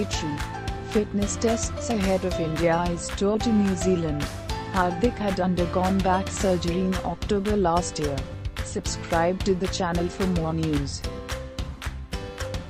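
Nothing goes wrong anywhere in this one; there's no technical fault to point to at any moment in the audio.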